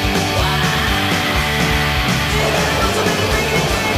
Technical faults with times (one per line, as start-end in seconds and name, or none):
none